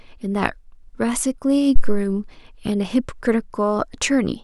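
At 1.76 s a phantom power thump interrupts the speech and lasts until about 2.07 s. Switching the supply on a live input drives a DC step through the coupling capacitors, and the preamp passes it as a deep, low-frequency thud. It peaks at about -1 dBFS, almost at full scale, then falls away with a decay of about 71 ms, leaving a brief settling tail before the signal returns to its normal level.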